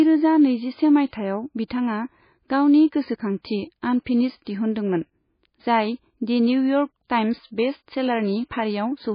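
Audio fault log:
throughout: MP3 compression. Nothing is heard above 5 kHz, so the speech sounds dull. The damage is heavy, with watery, swirling detail as weak frequency lines drop in and out. This is likely a very low-bitrate MP3, around 19 kbps.
1.08 to 1.13 s: pre-echo. A short hiss rises about 53 ms before a sharp onset, and the attack sounds smeared. The codec spread quantisation noise across its whole block, so noise meant for the loud attack leaked into the quiet moment before it.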